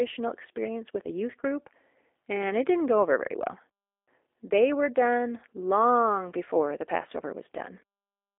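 From start to end, the speech carries the sound of the G.729 codec. The damage is plainly audible. The band sits between 300 Hz and 3.6 kHz, so the sound is thin and boxed in. The codec does not send the waveform itself. It sends a vocal tract filter, a pitch predictor and a few pulses per frame. The rough, synthetic texture fits an 8 kbit/s rate. Voices stay intelligible but sound buzzy and slightly artificial.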